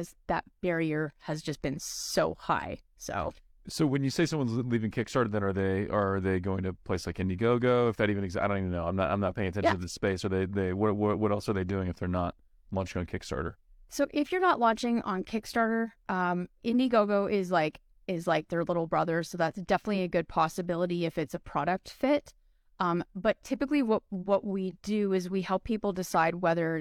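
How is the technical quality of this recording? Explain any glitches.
No technical glitches can be heard in this recording.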